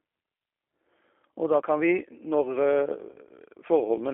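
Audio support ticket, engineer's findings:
Narrowband, rough and slightly synthetic speech throughout, confined to roughly 300 Hz to 3.4 kHz. G.729 codec: pulse-based vocal tract model, consistent with 8 kbit/s, plainly audible damage.

Brief buzzy smear, fading at 3.12–3.16 s. VoIP packet loss concealed by the speech codec: about 20 ms extrapolated from the prior frame, fits a single lost packet.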